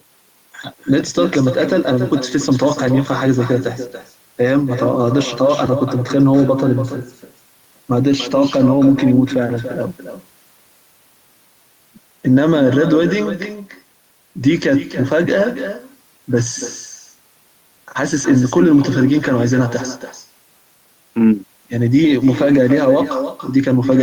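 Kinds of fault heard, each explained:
Echo with no canceller: every phrase is trailed, roughly a third of a second later, by a thinner copy about 9 dB quieter. The far end's loudspeaker is feeding its microphone, and nothing strips that return before it travels back down the line.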